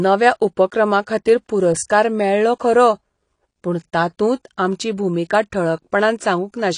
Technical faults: AAC compression

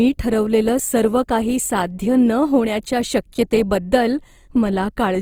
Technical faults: Opus compression

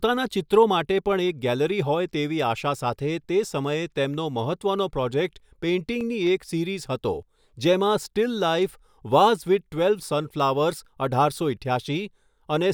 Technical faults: CD scratch ticks

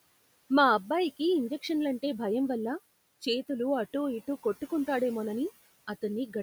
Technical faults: noise suppressor artifacts

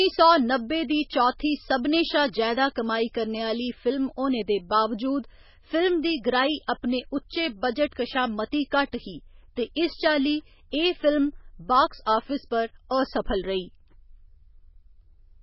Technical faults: MP3 compression

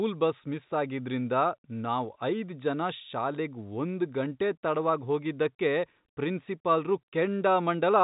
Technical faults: none

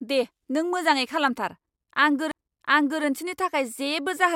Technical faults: CD skip

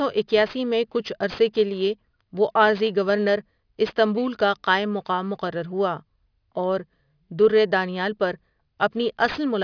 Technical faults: aliasing

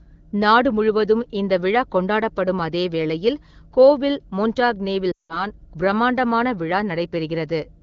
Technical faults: lost AMR speech frames

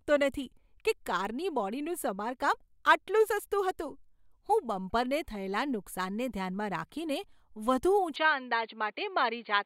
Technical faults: input switched to a poorer device

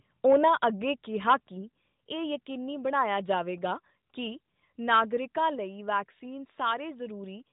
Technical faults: microphone overload; microphone volume stepped down

